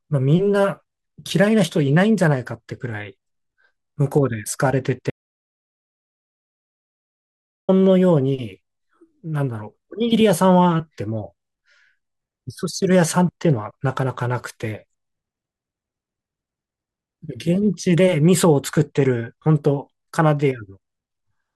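At 5.10 s the speech stops abruptly, mid-flow. An audio dropout to silence follows and lasts until 7.69 s, about 2.58 s in all. The gap is dead digital silence, with no room tone or hiss underneath. The speech then resumes just as suddenly. The likely cause is a brief loss of the input signal while recording carried on, writing silence in its place. Whatever was spoken during those 2.58 s is lost.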